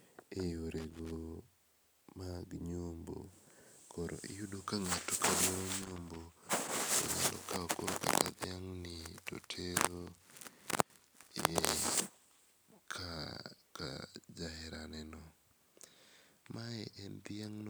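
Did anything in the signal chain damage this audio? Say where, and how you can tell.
Yes. The damage is in the analogue wiring: loose connector crackle at 0.78 to 1.11 s and again at 5.82 to 6.19 s. In each burst the speech is chopped by irregular scratching as a worn contact rapidly makes and breaks, interrupting the signal and popping on any DC present. Unlike digital dropouts or buffer clicks, the bursts are ragged and unevenly spaced rather than clean, periodic gaps.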